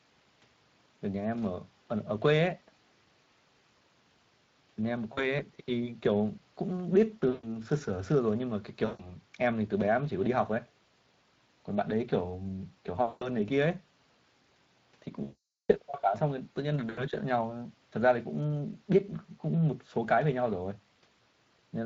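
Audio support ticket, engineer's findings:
Speex codec, whole clip: plainly audible hoarse, noisy grain on the speech, with a smeared, noise-like texture in the upper band. The level of damage fits a Speex setting near 20 kbps. Probable component: the codec in the call path. Few bits left for excitation detail. Unlike broadband hiss, the roughness follows the voice and drops out with it.

VoIP packet loss concealed by the speech codec, at 5.13, 7.29, 8.85, 13.07, 15.23 and 16.89 s. Speech stretches into a buzzy tone or coloured noise that fades. Gaps run from about 40 ms to 460 ms, the longest at 15.23–15.71 s. Mechanism: the decoder repeats its last pitch and filter at falling gain. The speech stays weak for a moment after each event.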